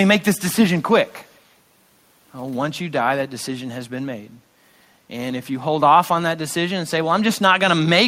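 Echo leak, from 1.06 to 1.52 s: a faint delayed copy of the speech trails the original by about 0.28 s, sitting far below it, roughly 40 dB down, so it registers as a ghostly after-image rather than a clear repeat. The likely cause is a far end playing the call through a loudspeaker, where the echo canceller failed to strip out what its microphone caught, sending that residue back down the line.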